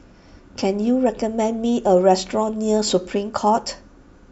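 No dropouts, clicks, distortion or other technical faults can be heard anywhere in the signal.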